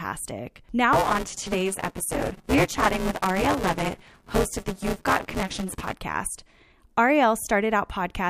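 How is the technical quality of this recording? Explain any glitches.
The speech has one clear fault. Buffer tearing runs from 0.93 to 5.93 s. Writer and reader slipped, so roughly a third of each buffer replays audio about 10 ms old. This causes a robotic 188 Hz buzz, which fits a 256-sample buffer.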